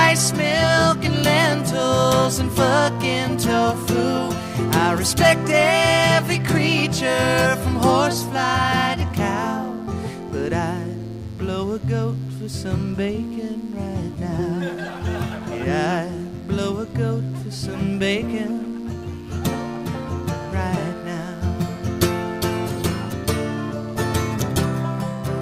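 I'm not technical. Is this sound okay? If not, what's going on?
No. A mains buzz runs through the whole clip: a steady, raspy 50 Hz electrical noise, harsher and more nasal than a smooth, low hum.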